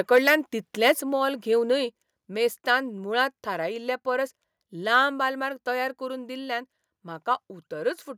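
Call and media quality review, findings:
Microphone overload, 0.15–0.35 s, 0.86–0.91 s (just before "मोल घेवनय") and 4.94–4.96 s (just before "आलमार तयार करून दिल्ल्यान"). Harsh, crackly edge on the loudest peaks. Likely input gain set too high: peaks about 1–5 dB past the converter ceiling, flattened tops.

Microphone volume stepped down, 1.02 s and 5.10 s (the second just before "आलमार तयार करून दिल्ल्यान"). Sudden level drop in one step, about 4 dB then about 2 dB, each shortly after a distorted peak. Likely call software auto-gain cutting device input volume after detecting clipping.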